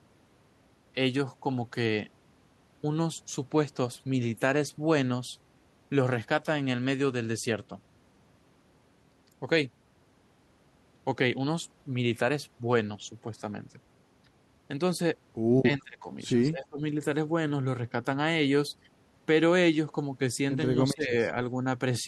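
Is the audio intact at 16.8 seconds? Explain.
No. At 16.8 seconds the speech is still in a brief dip that runs from 16.52 to 16.81 s. It drops by about 20 dB. This is speech suppressed in double talk, likely an echo canceller mistaking simultaneous talk for echo and ducking it.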